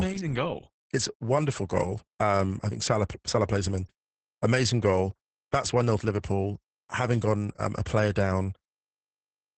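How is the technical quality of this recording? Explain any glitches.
The speech has one fault, present for the whole clip: Opus voice compression. Nothing reaches above about 8.5 kHz, and the voice sounds muffled, hoarse and faintly robotic, which fits SILK-mode linear-prediction coding at a very low bitrate near 10 kbps with coarsely coded excitation. Unlike a plain low-pass filter, it roughens the voice itself, and it lacks MP3's swirly, metallic warble.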